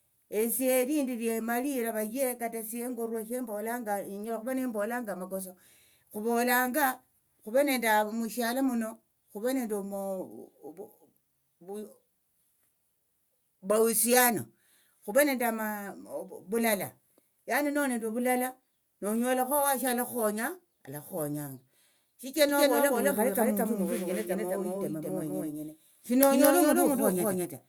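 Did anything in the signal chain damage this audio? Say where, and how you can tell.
Yes. From 22.49 s to the end, the speech is heard twice: a doubled audio track, with a second full-band copy trailing roughly a fifth of a second behind at about the same level. It is not room echo or acoustic feedback, because the copy has no decay, no added room colour, and switches on abruptly at 22.49 s. The likely cause is a capture or buffering stage feeding the same signal twice through paths with different latency.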